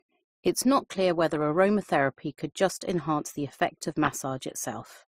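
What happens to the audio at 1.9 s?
Transcoding between lossy codecs affects 1.9 s, as it does the whole clip. The speech was likely encoded twice, in a sequence consistent with MP3 followed by Opus, so each stage's artefacts stack: smeared, swirly detail layered together, with nothing above 15.9 kHz.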